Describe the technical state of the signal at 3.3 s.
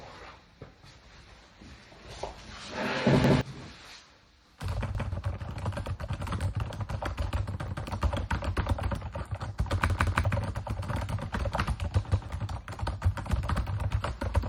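At 3.3 s the audio is in the middle of a repeated buffer running from 3.24 to 3.41 s. New audio did not reach the output in time, so the device played its last block again, once, about 170 ms long, which fits an 8192-sample buffer. The same stretch of sound is heard twice with a hard join, a short stutter. Unlike a dropout, there is no silence. Roughly 150 ms of the real audio never plays.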